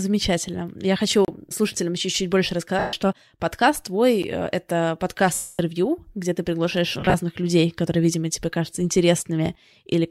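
At 1.25 s the speech drops out for 32 ms and snaps back. This is a block of digital silence: samples were zeroed, likely because the output buffer wasn't filled in time. From 2.79 to 2.93 s, 140 ms turns into a noisy, smeared wash. These are lost LE Audio frames. The LC3 decoder concealed the gap by repeating the last spectrum with random signs, and the loss fits 10 ms frames. A second, shorter silence block sits at 4.22 s, a tick about 11 ms long that fits a 512-sample buffer. From 5.34 to 5.59 s a longer 250 ms loss smears, then fades away as concealment gives up. Between 7.00 and 7.15 s scattered losses totalling 80 ms roughen the sound, each burst around 30 ms at most.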